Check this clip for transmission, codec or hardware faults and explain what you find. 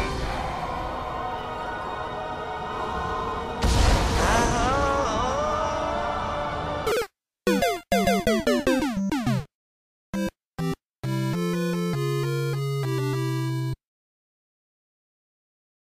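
One fault: a channel delay (comb filtering) from 8.28 to 10.14 s. One channel ran about a sample late before the mono sum, cancelling around 20 kHz, so the top end dulls.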